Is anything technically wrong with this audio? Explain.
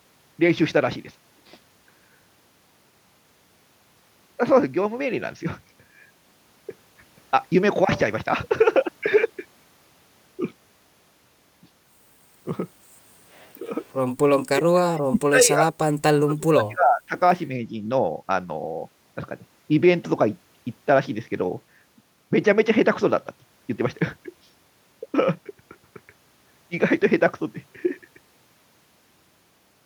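Yes. The speech dips slightly at 13.6 to 13.67 s, then drops out almost entirely at 14.5 to 14.76, 14.92 to 15.8 and 16.06 to 17.15 s, losing roughly 35 dB. This is likely speech suppressed in double talk: an echo canceller mistook overlapping far-end audio for echo and attenuated the talker.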